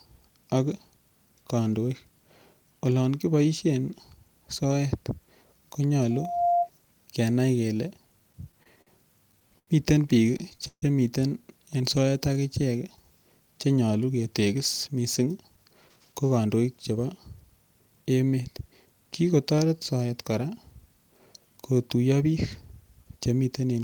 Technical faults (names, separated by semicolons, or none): loudspeaker feedback squeal; repeated stalls (stutter); call audio freeze; jitter buffer slow-down; jitter buffer speed-up